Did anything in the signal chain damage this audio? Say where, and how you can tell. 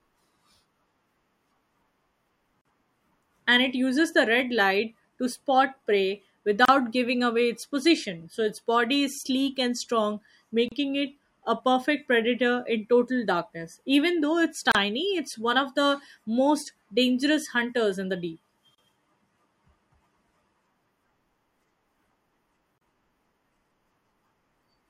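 Yes, the speech has a gap at each join of encoded pieces: short silences at 2.61, 6.65, 10.68, 14.72, 18.75 and 22.78 s, spaced 4 s apart. The first lasts about 39 ms and the rest 32 ms. Each one appears as a thin vertical blank stripe on the spectrogram, or as a flat notch in the waveform with slightly smeared edges. The speech resumes exactly where it stopped. This points to separately encoded segments concatenated untrimmed, with encoder delay and final-frame padding left in.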